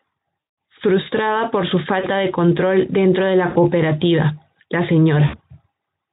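At 0.39 to 0.57 s, 1.99 to 2.08 s (between "por su" and "de control dentro de"), 3.49 to 3.57 s (after "de control dentro de") and 5.27 to 5.40 s, there is VoIP packet loss concealed by the speech codec. The decoder stretches the last pitch into a fading buzz rather than leaving silent gaps. The longest, at 0.39 s, fits about nine lost 20 ms frames. Weakness lingering after each gap distinguishes it from a clean dropout.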